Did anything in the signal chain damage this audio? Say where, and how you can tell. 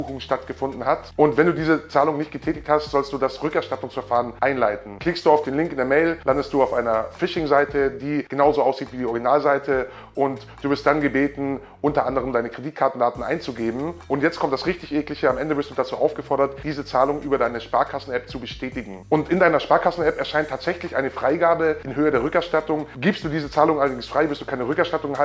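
No, nothing along the chain has left a mark I can hear, so there's no damaged stage to point to.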